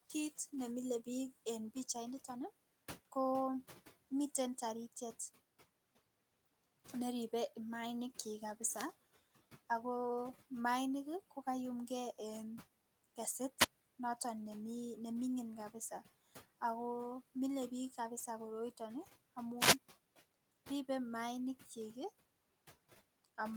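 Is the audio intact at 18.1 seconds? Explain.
Yes, at 18.1 seconds the speech is intact, with only the room's own background noise sitting about 21 dB beneath it as part of the recording.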